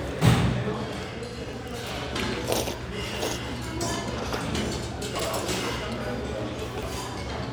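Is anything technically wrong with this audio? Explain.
Yes. Chunks out of order at 1.44–1.53 s, 5.16–5.25 s and 6.64–6.83 s: blocks of about 46 ms arrived late and play after the ones meant to follow, one block late in the first two spots and three late in the third. Nothing is lost, but each spot has three hard joins and each moment sounds briefly jumbled.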